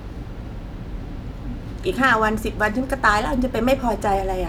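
Nothing in the speech recording stood out as a technical fault on careful listening.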